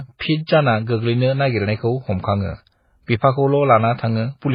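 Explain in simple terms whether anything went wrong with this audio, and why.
Something did go wrong, from start to finish. The speech sounds dull and muffled, because nothing above about 5.2 kHz survives. It also carries two kinds of digital roughness at once, each codec's own artefacts heard together. The likely cause is transcoding between lossy codecs. The sound was squeezed into MP3, then squeezed again into HE-AAC. The second step wasted effort copying the first one's damage, added its own, and kept the lost treble missing.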